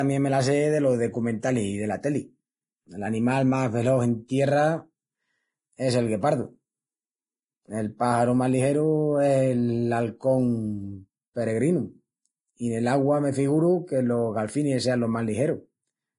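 Speech throughout sounds hissy and grainy, with roughened tones, smeared consonant attacks and nothing above 10.6 kHz. This is likely heavy Vorbis compression at a bitrate near 27 kbps, which replaced fine treble detail with coarsely quantised noise of similar energy.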